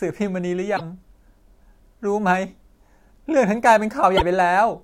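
A broken MP3 bit reservoir, likely the cause, garbles the speech from 0.76 to 0.81 s and again from 4.17 to 4.22 s: after dropped frames, the next frames seek borrowed data in earlier frames, find foreign bytes, and decode wrongly for about two 24 ms frames.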